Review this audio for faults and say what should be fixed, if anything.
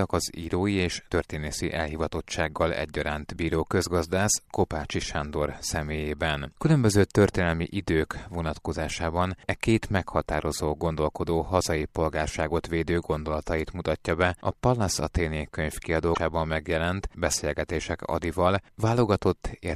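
At 16.11 to 16.18 s there's a brief glitch from damaged data in the compressed stream: bad bytes knocked the decoder off frame sync until it found the next header. To prevent it, checksum files in transfer and re-pull a clean copy from the source.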